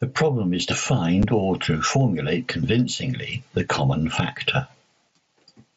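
Speech here, and the level never sits still: the gain swings by roughly 20 dB, so the dynamics come out squashed and breathing. That's gain pumping, most likely from the input gain being set far too hot for the mic with a fast limiter or compressor yanking it back down on each peak. The whole clip carries that seesaw. Then at 1.23 s, right after "problem is to" and before "or to formulate convincingly", there's a tiny hole of about 7.5 ms with hard edges. That's unconcealed Bluetooth headset packet loss: a single voice packet dropped between headset and phone, and nothing filled the gap, so the signal just drops out and snaps back. The link itself sounds like the mSBC wideband headset codec, with speech reaching up to about 8 kHz and only a light grainy edge on the louder bits.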